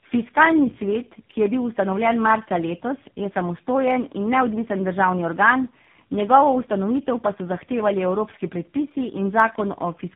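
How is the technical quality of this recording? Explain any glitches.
The quality is poor, with two faults. Tandem speech coding runs throughout: three speech codecs in a row, ending in AMR-NB, compound their damage, leaving muffled, rough, warbly speech with nothing above 3.8 kHz. A single codec would sound cleaner. From 0.19 to 10.04 s, clock slip clicks tick faintly about every 0.15 s. A clock mismatch of around 150 ppm likely drops or repeats single samples, giving evenly spaced ticks rather than random crackle.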